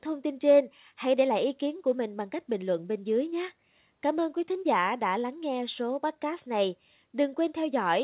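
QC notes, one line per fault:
No faults found; the speech carries the expected sound of call microphone processing and a WebRTC call path through G.711 mu-law, with no content above 4 kHz.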